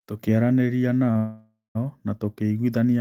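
At 1.11 s a packet arrived late and the jitter buffer briefly ran dry, producing a short stall from a late packet. The receiver held the last sound for about 36 ms before resuming, so the speech drags with a faint buzz or dip, but nothing is lost.

From 1.17 to 1.77 s a call audio freeze follows, likely caused by packets held up in transit emptying the buffer again. The last sound is stretched into a fading buzz or hiss, ending in roughly 160 ms of silence, before speech resumes where it stopped, now running about 580 ms later.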